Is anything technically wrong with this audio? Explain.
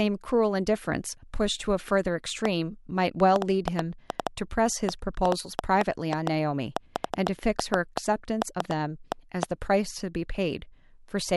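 Yes. From 2.45 s to 9.44 s the speech carries a train of clicks, about thirty sharp pulses arriving at roughly 3.9 per second with uneven spacing. They peak around 15 dB above the speech and keep ticking through the pauses. Each click has much the same shape, pointing to a likely cause outside the voice, such as electrical interference or a faulty connection or power supply. Mouth clicks and plosives vary in shape and follow articulation. These persist through silence.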